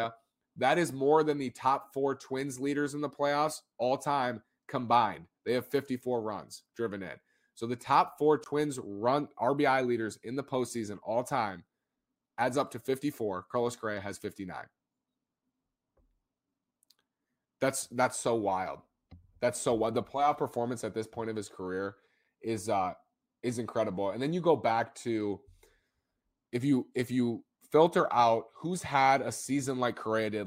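Nothing in the speech recording stood out as a technical fault on listening.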